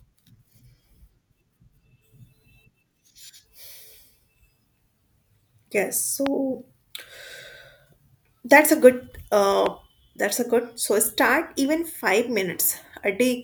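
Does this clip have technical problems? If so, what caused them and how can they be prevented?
Yes. A stray voltage pulse, likely from a connector, switch or static discharge, entered the speech signal twice as a loud pop: once at 6.26 to 6.29 s, roughly 15 dB above the speech, and again at 9.66 to 9.68 s, about 10 dB above, just before "that's a". Each is a single sharp pop with the speech continuing underneath. Secure cables and switches, and ground equipment well, to prevent it.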